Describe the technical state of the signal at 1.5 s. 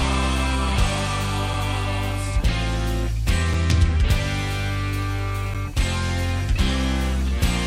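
At 1.53 s there is a gap between stream segments: mismatched timestamps at the 2-second segment boundary leave a roughly 5 ms silent hole with hard edges.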